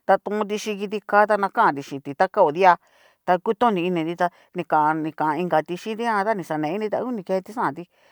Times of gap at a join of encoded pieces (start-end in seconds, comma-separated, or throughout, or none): none